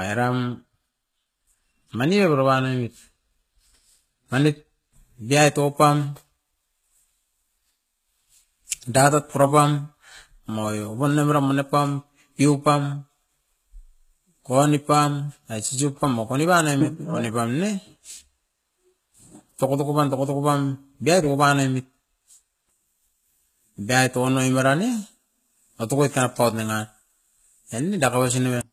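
From start to finish the speech has likely passed through HE-AAC compression at a very low rate, consistent with about 20 kbps, where only the lower spectrum is truly coded and the treble is synthesised by copying lower bands upward under a coarse envelope. That rebuilt top end never matches the real harmonics, so s sounds come out gritty, metallic and lispy. The damage is plainly audible, and nothing survives above 14.9 kHz.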